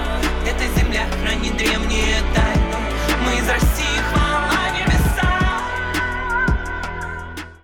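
No technical faults can be heard anywhere in this audio.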